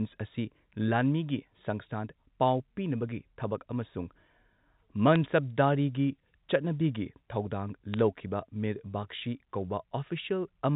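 Bit errors on a digital phone line hit this telephone-band speech at 5.16 s and again from 7.94 to 7.99 s as sharp ticks and brief crackle. Flipped bits, at an error rate of roughly a tenth of a percent, corrupt individual logarithmic-coded samples. Errors landing on sign or high-order bits throw a sample far off its true value. The audio stops short of 4 kHz, which fits 64 kbit/s G.711 A-law coding.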